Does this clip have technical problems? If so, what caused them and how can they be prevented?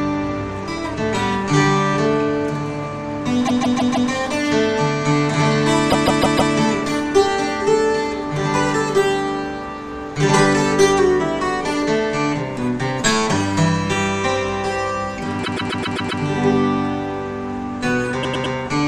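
Yes. Repeated frames cause stutters at 3.46 to 4.09 s and 5.89 to 6.52 s, where a 157 ms block replays four extra times. At 15.43 to 16.21 s, a 131 ms block replays six extra times. At 18.22 to 18.54 s, a 105 ms block replays three extra times. Each time, the decoder plays the same stretch of compressed audio again, and the clip grows longer by the repeated time. Writing or sending each frame exactly once, with sequence checks that drop duplicates, prevents this.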